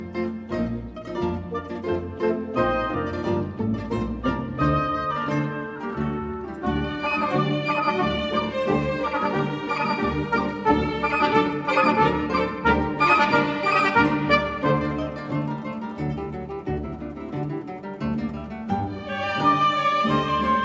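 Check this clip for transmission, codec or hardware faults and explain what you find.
No faults turn up when checking this clip.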